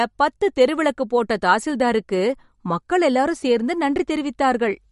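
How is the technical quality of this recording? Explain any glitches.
The quality is poor. MP3 compression damage is plainly audible throughout. The speech has nothing above 11.2 kHz, and its texture sounds watery and swirly. This is likely a low-bitrate MP3 encode, consistent with about 48 kbps. Short of bits, the encoder cut the treble and dropped weak frequency lines, which flicker between frames.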